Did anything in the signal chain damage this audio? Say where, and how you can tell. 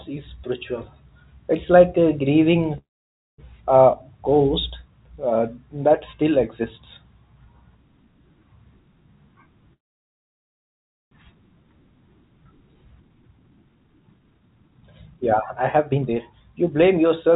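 Yes, call audio freeze at 2.78–3.40 s, after "like a grieving" and before "uh ghost uh that", and at 9.73–11.13 s. Each is a brief fading tail then silence, about 0.55 s and 1.35 s, with the speech resuming intact but later. The likely cause is delayed packets draining the jitter buffer, with the call path's 4 kHz band limit pointing to G.711.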